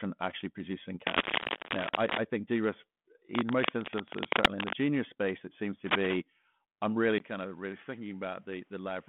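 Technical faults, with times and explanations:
1.07–2.18 s, 3.32–4.74 s and 5.86–6.16 s, cable scratch noise: dense, ragged bursts of scratching ride over the speech, about 5 dB above it in the first and last bursts and roughly level with it in the middle one. This is likely a worn cable or connector being moved so that its contact resistance jumps. The bursts are irregular and ignore the speech level, which sets them apart from codec hiss.
7.18 s to the end, input switched to a poorer device: a silence of about 20 ms is followed by a sudden drop in level of about 10 dB. Nothing passes above 3.8 kHz, and a new noise floor sits about 40 dB below the speech. This is likely a change to another microphone or a headset profile. Unlike a passing dropout, the duller tone holds steady once it arrives.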